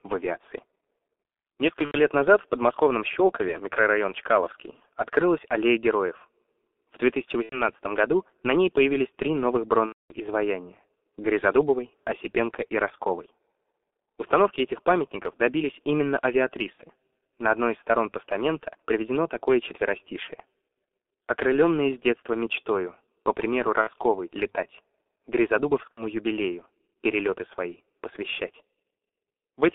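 Throughout, the G.723.1 codec at about 6.3 kbit/s limits the speech to 250 Hz to 3.5 kHz, sounding muffled and hoarse. A spectrogram shows an empty band above 3.5 kHz.

VoIP packet loss concealed by the speech codec occurs at 1.85–1.96 s, 7.43–7.63 s, and 9.86–10.14 s after "ней появились три новых". It recurs at 16.73–16.82 s, at 23.81–23.91 s after "детства мечтою по примеру", and at 25.92–26.03 s before "юбилею перелеты свои посвящать". Each time, the decoder extrapolates from its last pitch and filter into a fading buzzy tone or coloured noise, which shows as flat, smeared spectral content and a decaying waveform envelope.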